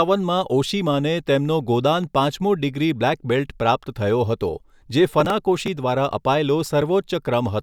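From 5.20 to 5.68 s there's processor overload crackle: several tiny buffers, a few milliseconds each, get skipped outright, leaving hard-edged gaps that tear gritty crackle through the speech.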